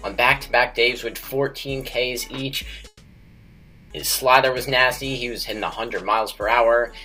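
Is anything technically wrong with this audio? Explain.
Yes. There is a call audio freeze from 2.87 to 3.92 s. For just over a second, the last sound is held and carried on as a fading buzz or hiss. It then sinks to silence for about 20 ms. The likely cause is packets delayed in transit, leaving the jitter buffer empty. When they arrive, the audio resumes where it stopped. Nothing is lost, but everything after 3.92 s now runs about 1.03 s late.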